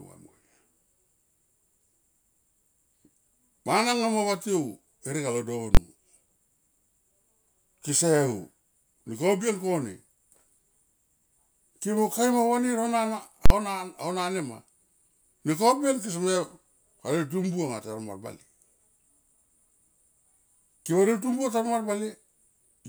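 At 5.75 to 5.77 s, just after "herek alo", and again at 13.46 to 13.50 s, the speech is replaced by invalid numbers at full scale. A calculation produced infinite or invalid values that were forced to the maximum level, so the output sits pinned flat for about 23 ms, which fits a 1024-sample block, and then about 46 ms, which fits a 2048-sample block. Unlike clipping, which flattens only the peaks of a waveform that is still there, each block is a single loud bang with nothing audible inside it.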